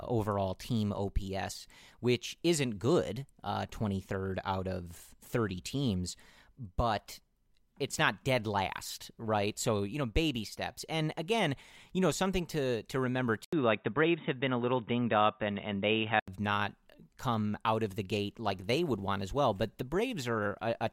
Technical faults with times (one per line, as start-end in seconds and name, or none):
13.45-16.28 input switched to a poorer device